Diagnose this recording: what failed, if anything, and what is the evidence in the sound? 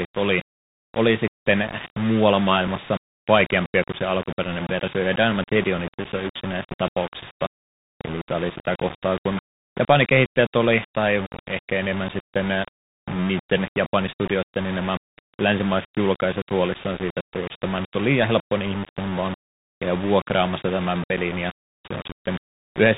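Quiet passages throughout the speech turn gritty and grainy, with noise riding close under the signal. The likely cause is low bit depth without dither at sample-format conversion, rounding to roughly 5 bits.

The speech is dull, with nothing above 4 kHz, scratchy s sounds and a granular hiss. This is the Bluetooth CVSD headset codec, whose one-bit stream cannot follow fast, loud high sounds.

A small tick at 2.67 s, after "oli oli sitten muualla" and before "vaikeampia kuin se alkuperäinen", is a Bluetooth headset packet repeated. One 3.8 ms packet was lost and its predecessor was decoded again.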